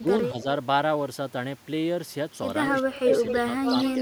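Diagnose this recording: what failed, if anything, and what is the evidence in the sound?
Call processing: the speech dips at 0–0.09, 0.33–0.47 and 2.81–3.08 s, about 20 dB at worst. That's likely speech suppressed in double talk by the echo canceller.

Echo leak at 2.98–3.39 and 3.65–4.0 s: a copy 250 ms late, near full level, then about 5 dB down. That's likely uncancelled loudspeaker pickup sent back.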